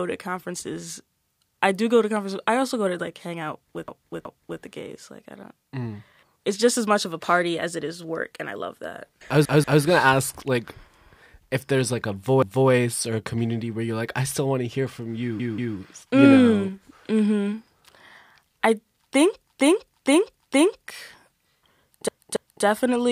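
Speech with repeated frames: a block of 0.19 to 0.46 s is replayed one to three extra times at 3.88, 9.45, 12.43 (after "if there's like a"), 15.40 (after "want to hear from"), 19.48 (after "I think") and 22.08 s. Each stutter looks like a copied spectrogram tile.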